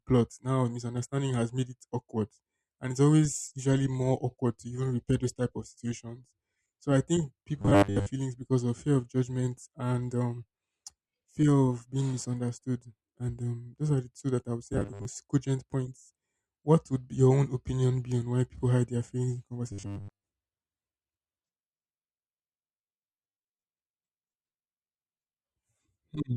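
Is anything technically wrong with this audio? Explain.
Yes. Robotic sound from repeated short buffers occurs at 7.62–8.07 s (after "I think", before "feelings because of fear"), 14.73–15.05 s (after "that I would say", before "most cogent points"), and 19.72–20.26 s (after "hide their feelings in"). The speech becomes a rigid metallic buzz at 100 Hz, likely from a 10 ms buffer replayed when audio arrived late. Most of the first and third stretches and about half of the second are repeats.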